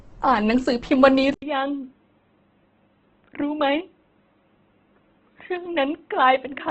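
From the start, the speech carries heavy coding damage, most likely Opus compression in its music (CELT) mode at a low rate, consistent with roughly 12 kbps. Nothing survives above 8.2 kHz, and the voice sounds grainy and rough, noisy rather than swirling. A spectrogram would show a hard ceiling at 8.2 kHz and mottled, noise-filled bands below it instead of clean harmonics and sharp gaps.

At 1.34 s the input switched to a poorer device, likely a different microphone or a headset's call profile. An 80 ms silence marks the change, visible as a flat gap in the waveform. From there to the end, the sound is dull and boxy, with nothing above 3.8 kHz, so the spectrogram ceiling drops sharply. The waveform shrinks by about 10 dB, and a faint new noise floor sits well below the speech.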